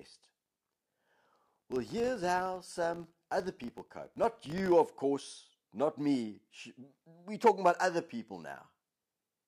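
From the start to 4.74 s, just before "of course not me", the speech carries a filter restarted on every block: the filter drops its memory at each block boundary and begins from silence, so each block opens with a small click. At 50 per second these fuse into a 50 Hz buzz, which fits blocks of about 20 ms. Unlike mains hum, it rises and falls with the speech level instead of droning steadily underneath.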